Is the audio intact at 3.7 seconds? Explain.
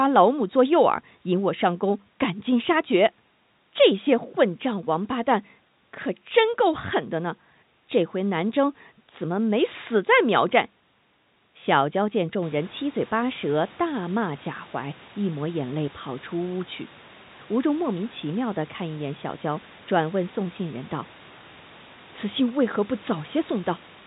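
Yes, the audio is intact at 3.7 seconds, with no fault at that moment.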